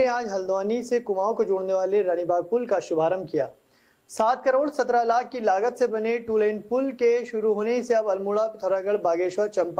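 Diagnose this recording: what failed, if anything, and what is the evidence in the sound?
Clock drift between sender and receiver, at the buffer stage: the sending clock runs slow, by around three percent, so the jitter buffer keeps draining. Unlike random network jitter, the timing hiccups lean one way throughout, pointing to mismatched oscillators rather than an unstable link.

Repeated timing corrections, in the receiver's buffer management: from 0.03 s to 9.59 s the receiver stretches the audio, playing at 98% speed and adding roughly a fifth of a second overall. Small, unevenly spaced repeats do the stretching rather than a pitch drop.

Scattered short gaps, a network fault: between 3.52 s and 5.17 s around five tiny holes, the longest near 10 ms, were patched by extending the preceding sound, giving brief ticks or smears. These are isolated concealment events, distinct from the continuous, one-directional drift corrections.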